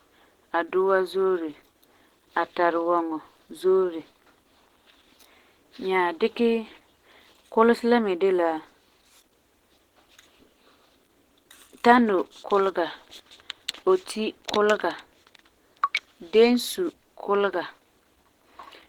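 Speech runs through a low-rate codec for its whole length, most likely Opus compression at a rate near 16 kbps with the encoder working in its hybrid speech mode. With so few bits, the lower band is coded by the speech layer while the upper spectrum is filled approximately rather than reproduced, so the voice comes across plainly muffled and hoarse, with a rough, grainy edge. The full bandwidth is kept, but the top end sounds noisy.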